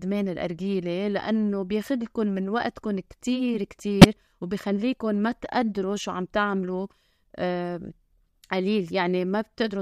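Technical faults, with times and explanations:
4.01 to 4.05 s, corrupt frame decoded: a sudden squeak-like burst of about 30 ms cuts across the speech. Damaged bits in the compressed stream were decoded as valid, so misread gains and spectral codes put energy at wrong frequencies. The length points to roughly two codec frames. Unlike a dropout or concealed packet loss, which brings a gap or a smeared repeat of the preceding sound, this adds new, unrelated energy.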